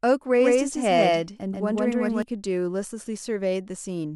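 From 0.38 to 2.22 s, the speech has a doubled audio track. A second full-band copy trails about 150 ms behind, at roughly the same level. It likely comes from a slower capture path. The copy is dry, with no decay, and cuts in and out abruptly.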